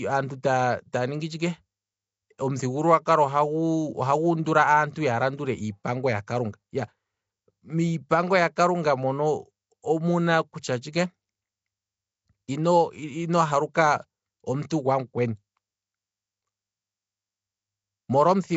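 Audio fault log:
throughout: Nellymoser compression. The speech carries a rough, hissy haze and a smeared, underwater character, and nothing is present above 7.7 kHz. This is likely the Nellymoser Asao codec once used for Flash microphone audio. It codes each short block with a fixed, small number of bits per sample, so quieter frequency bands get nothing and are refilled with noise. The damage is plainly audible and points to a low rate of around 32 kbps.
13.74 s: pre-echo. A brief wash of hiss, about 10 ms long, arrives just before a sharp onset, and the onset itself sounds softened and blurred. The transform coder spreads its quantisation noise evenly across the whole block. Because this attack falls late in a block, noise scaled for the loud moment also fills the silence just before it, so the hiss comes ahead of the sound that caused it.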